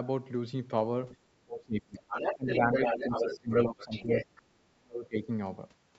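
A short speech clip, and there's call-style microphone processing on it, which takes out the lowest bass. The trouble is two-way talk. First there's the other side's voice leaking through: a faint scrap at 1.12–1.16 s, way down at roughly 30 dB under the talker, then a long stretch from 1.95 to 4.42 s where that second voice sits at about the same level as the main one. The likely cause is a loudspeaker on the talker's end feeding back into the mic, with the echo canceller failing to strip it out. Tied to that is speech suppressed in double talk. The talker keeps ducking while both sides overlap: at 1.45–2.01 s by up to roughly 25 dB, at 2.35–2.72 s and 2.90–3.50 s by around 20 dB, at 3.66–4.08 s by around 15 dB, and worst at 4.42–5.27 s, where it drops by something like 40 dB. That's likely the canceller unable to separate its own talker from the echo and pulling everything down together.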